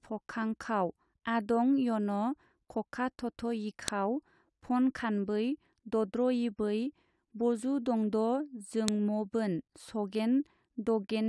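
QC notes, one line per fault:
3.88 s and 8.88 s, file header played as audio: a sharp, loud click cuts through the speech at each point, exactly 5 s apart. The audio was joined from separate WAV pieces whose header bytes were left in and played as samples, snapping regardless of the speech.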